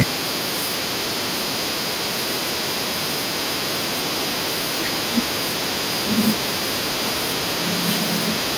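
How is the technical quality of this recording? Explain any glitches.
A harsh, crackling burst marks the very start of the speech, from 0.00 to 0.03 s, where the opening peaks sound flattened and gritty rather than rounded. This is microphone overload, most likely from an input gain set too high: the signal drives about 11 dB past the converter's ceiling, so roughly a third of the samples in that span are squared off at the converter's limit, and the sliced-off tops add that brief distorted edge.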